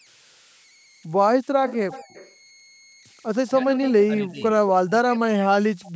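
Throughout, a faint whistle around 2 kHz hangs in the pauses, with grainy noise under the quieter passages, about 34 dB below the speech. These are converter idle tones: without dither, a delta-sigma converter falls into repeating bit patterns when its input is small, and those patterns produce tones.

From 1.68 to 2.35 s a delayed copy of the talker trails 233 ms behind the original, some 20 dB down. This is an echo leak, likely from a loudspeaker on the far side whose echo canceller sent part of its microphone pickup back into the call.

From 3.51 to 3.82 s the voice briefly sags by around 10 dB. Right after, from 3.82 to 3.91 s, a shorter and slightly louder scrap of the same 233 ms echo returns.

The voice dips again, by around 15 dB, from 4.06 to 4.44 s. From 4.87 s to the end it falls away by as much as 40 dB and almost disappears. These dips are likely speech suppressed in double talk: with both sides talking at once, the echo canceller could not separate its own talker from the loudspeaker echo and turned both down.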